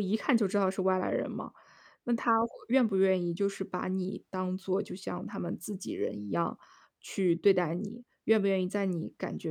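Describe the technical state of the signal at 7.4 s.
At 7.4 s the speech signal is intact, with no audible technical fault at that moment.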